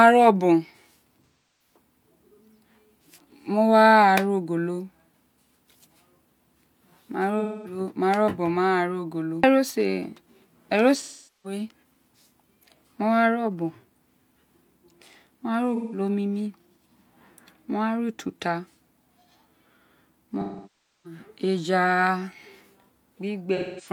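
AAC frame loss with concealment occurs at 1.26–1.76, 7.39–7.80, 10.96–11.59, 15.75–15.99, 20.41–21.20 and 23.56–23.88 s. The decoder rebuilds the missing frames from the last good spectrum, leaving smeared, phasey patches lasting 0.17 to 0.64 s.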